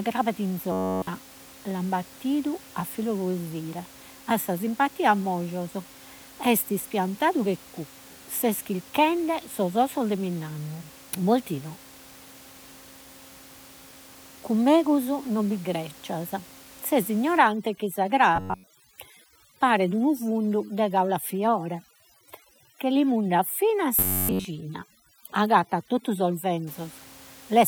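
Speech with robotic sound from repeated short buffers at 0.72–1.07 s, 18.36–18.68 s and 23.99–24.45 s: a rigid metallic buzz near 93.8 Hz, likely from repeating 10.7 ms chunks, wholly in the first and last bursts and mostly in the middle. From 17.4 to 26.7 s, overdone noise removal breaks the background into twinkling near-silence, unlike the buzz's fixed pitch. Room noise sits about 23 dB below the speech.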